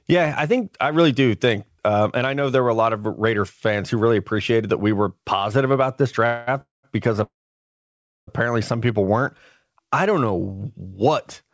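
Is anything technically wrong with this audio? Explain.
Yes, there are three call audio freezes, at 6.26 to 6.49 s, 6.61 to 6.85 s, and 7.23 to 8.29 s. Each time the sound stalls and a brief decaying buzz fills the hole, fading to silence for about 0.17 s in the second and nearly a second in the third. Then the audio picks up where it left off, nothing lost, just pushed later. The likely cause is packets arriving late and the jitter buffer running dry. The band stops at 8 kHz, which fits a wideband codec like G.722.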